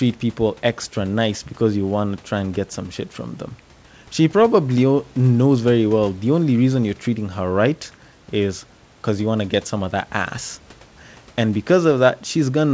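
No technical faults can be heard in this speech recording. It comes over a WebRTC call path with nothing above 8 kHz, which fits a G.722 codec, and faint room noise sits about 33 dB below the speech.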